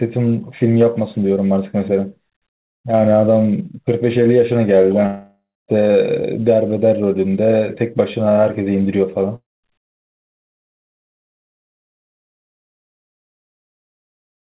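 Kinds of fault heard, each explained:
Long network dropout: From 5.06 to 5.70 s and from 9.36 to 9.65 s, the sound smears into a fading buzz and then goes quiet for about 0.26 s and 0.21 s. It resumes with roughly 0.62 s and 0.28 s missing, likely because packets never arrived. On a spectrogram, the last sound stretches flat and dims under the 4 kHz ceiling of the G.711 call path, then leaves a blank gap. The waveform shows a decaying envelope, a near-flat stretch, then an abrupt restart.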